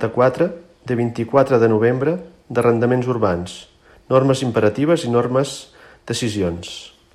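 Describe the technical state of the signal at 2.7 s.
At 2.7 s the speech signal is intact, with no dropout, clipping, glitch or other fault to be heard at that point.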